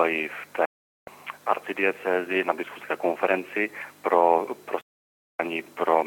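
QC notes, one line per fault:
0.65–1.08 s and 4.81–5.40 s, digital broadcast dropout: the sound is muted twice, for about 0.42 s and then 0.58 s, with a fade of roughly 3 ms, so it reads as an abrupt cut rather than a gradual fade. The receiver stopped getting usable frames, either through signal loss or failed checksums, and held silence until clean frames came back. The hole lengths fit whole frames of about 32 ms each. Whatever was transmitted during the gaps is gone, and the audio resumes further along.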